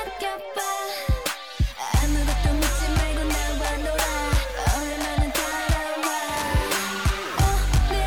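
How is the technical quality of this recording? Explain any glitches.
No glitches or technical faults can be heard here.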